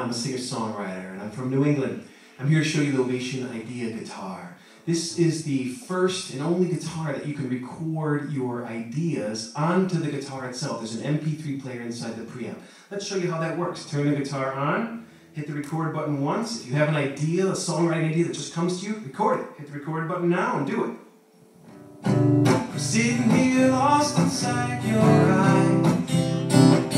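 Nothing stood out as a technical problem on listening.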